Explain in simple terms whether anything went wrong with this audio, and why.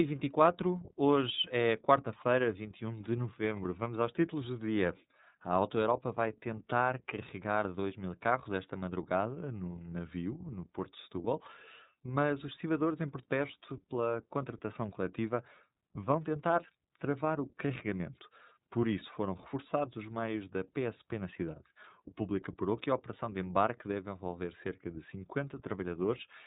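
Throughout the whole recording, the speech sounds muffled and slightly buzzy or robotic, like an old phone line. Everything above about 3.8 kHz is missing, so crisp sounds such as s and f lose their edge. This is the iLBC codec, a phone-style compressor that rebuilds the voice in short chunks, each coded separately, which fits 30 ms pieces. That rebuilding leaves a plainly audible rough, synthetic texture.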